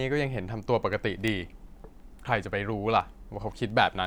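From 0.24 s to 4.05 s, sharp ticks of uneven strength sound at a steady pace, roughly every 0.15 s, about twenty in all. These are word clock ticks. The receiving device runs on its own clock, not locked to the sender's. They drift apart by something like 150 ppm, and each slip of a single sample clicks.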